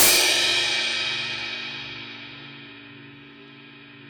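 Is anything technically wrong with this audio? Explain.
Yes. From 0 to 0.21 s there's integer overflow: the signal was pushed about 6 dB past full scale, and instead of being limited, the peaks wrapped around to the opposite sign. So rather than flattening like clipping, it throws out harsh, violent cracks right at the start.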